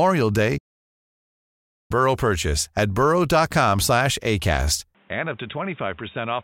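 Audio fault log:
0.58 to 1.91 s, playback stall: the speech cuts out mid-flow into a silence of about 1.32 s, then carries on. A gap this long with no crackle or repeated fragment, rather than a brief dropout, points to the player likely starving for data or having its thread blocked.
4.95 to 6.44 s, input switched to a poorer device: with no silence at the change, the speech turns dull and boxy, losing its upper band, drops about 5 dB in level and gains a new noise floor roughly 30 dB below it, consistent with a likely move to a narrower-band microphone or headset call profile rather than simple filtering.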